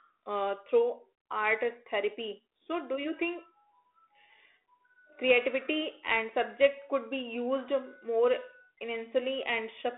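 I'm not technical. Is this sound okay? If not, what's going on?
Yes, no faults: this is telephone-band speech sent through G.726 ADPCM, so the thin phone-line sound and a faint coding grain are normal for that path.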